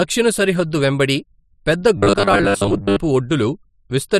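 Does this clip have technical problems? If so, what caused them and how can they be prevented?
Yes. From 1.97 to 3.00 s, after "సరిహద్దు వెంబడి పెద్ద", there is robotic sound from repeated short buffers: a rigid 100 Hz buzz, likely from 10 ms blocks replayed while most real audio is skipped. Larger buffers or a steadier audio feed would prevent it.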